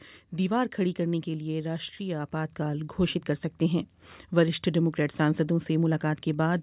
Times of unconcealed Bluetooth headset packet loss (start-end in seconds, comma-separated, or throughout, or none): none